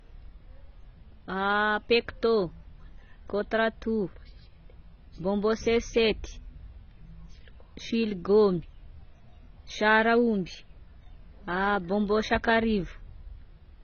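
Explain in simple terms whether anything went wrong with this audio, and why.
AAC compression runs through the whole clip: the speech sounds dull and smeared, with nothing above 6.5 kHz, likely from an encoder discarding detail to save space.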